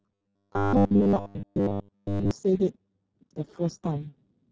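Speech runs through a Speex codec throughout, heavily damaged: hoarse and noisy, suggesting roughly 6 kbps, with a smeared, grainy spectrogram. From 0.01 to 2.31 s there is robotic sound from repeated short buffers: a rigid 100 Hz metallic buzz, likely from repeating 10 ms chunks across most of that stretch, visible as evenly spaced harmonic lines and a periodic, copy-like waveform.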